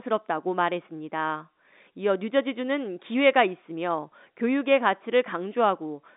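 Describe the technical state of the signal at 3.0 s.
At 3.0 s the speech is intact, with no dropout, click or distortion, only the narrow band of the G.711 telephone coding, with nothing above 3.8 kHz.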